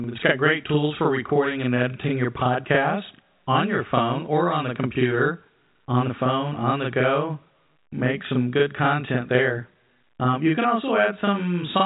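From start to finish the speech carries a channel delay, heard as doubling. One side arrives about 40 ms late and gets folded into mono with the other, so every syllable has a same-level twin trailing right behind it, like a tight slap. It sits on top of telephone-band G.711 audio that stops around 3.8 kHz.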